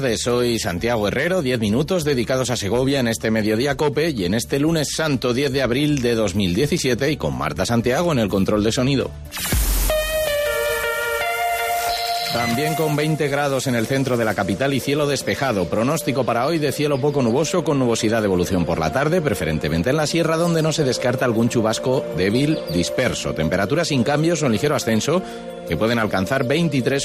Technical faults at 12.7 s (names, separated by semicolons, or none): none